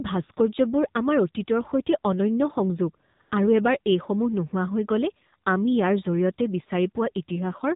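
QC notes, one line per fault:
Throughout, AMR narrowband mobile codec: the speech is squeezed into a telephone band with nothing above 4 kHz, and at what sounds like a low rate around 7.4 kbps the vocal-tract model plus sparse pulses gives it a plainly buzzy, synthetic edge.
3.16 to 3.20 s and 3.22 to 3.32 s, AMR comfort noise: right after "অতীতৰ সৈতে অনন্য সংযোগ" and before "আৰু এবাৰ", the codec treats the gap as silence and drops speech frames, so the real background switches out for a smooth, steady generated hiss in two short patches.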